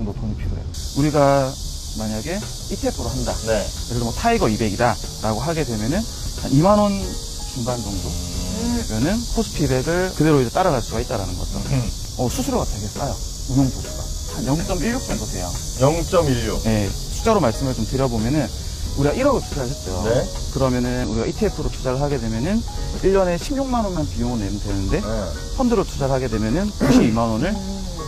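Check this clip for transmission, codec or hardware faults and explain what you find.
Three brief glitches come from damaged data in a compressed stream, at 14.68–14.73 s, 21.04 s and 23.92–23.98 s. Corrupted bytes make the decoder misread frames and resync, giving short disruptions in the audio.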